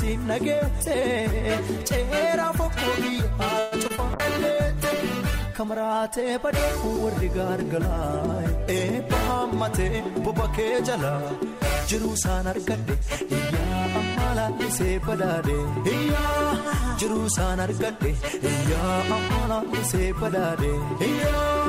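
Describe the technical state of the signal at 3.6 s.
Packets were likely delayed in transit at this point, draining the jitter buffer and producing a call audio freeze from 3.59 to 3.74 s. To cover the wait, the receiver stretched the last received sound for about 123 ms, heard as a brief buzzy smear that never drops into silence. When the delayed packets arrived, playback resumed where it had stopped, so nothing is missing, but everything after this point runs about 123 ms later than before.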